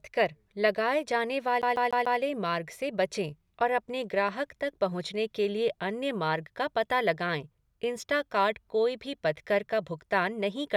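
From 1.62 s to 2.20 s the speech catches on a single tiny slice and plays it four times in a row, a rapid, perfectly even stutter with a brief dropout at each restart. The repeated fragment is about 0.15 s long. This is a CD stuck on one turn: a scratch knocks the laser back one track at the same point on each rotation of the disc, so one revolution's worth of audio loops until the player breaks free.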